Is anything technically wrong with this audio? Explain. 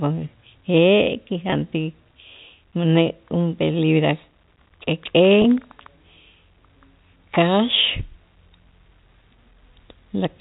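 Yes. At 1.50 s and again at 5.42 s the speech briefly holds with a slightly buzzy, frozen tone for about 20 ms. This is packet loss with pitch repetition: each gap, consistent with a single dropped packet, was filled by repeating the last pitch period, over G.711 telephone coding.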